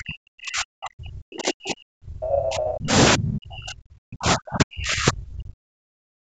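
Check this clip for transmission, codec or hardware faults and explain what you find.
One fault appears, in two stretches. From 0.0 to 2.92 s and again from 3.16 to 6.25 s, the speech sinks deeply, by roughly 40 dB. This is speech suppressed in double talk: an echo canceller likely mistook this talker for loudspeaker echo during overlapping talk and attenuated both. The band-limiting at 8 kHz comes from the call microphone processing and is expected.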